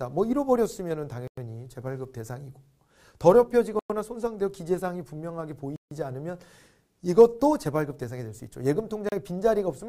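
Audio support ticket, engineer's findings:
Dropouts to silence at 1.27 s (100 ms), 3.79 s (106 ms), 5.76 s (151 ms), 9.09 s (33 ms). Audio resumes where it stopped or slightly later. Likely Bluetooth stall: interference delays packets, headphone buffer empties, playback pauses until retransmissions arrive.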